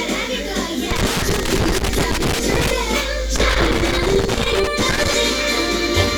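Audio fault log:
0.91–2.71 s, loose connector crackle: a worn contact keeps making and breaking as it shifts, chopping the signal into an irregular burst of scratchy crackle.
3.36–5.14 s, loose connector crackle: the same intermittent contact returns for about 1.8 s, rapidly interrupting the sound and adding ragged crackling.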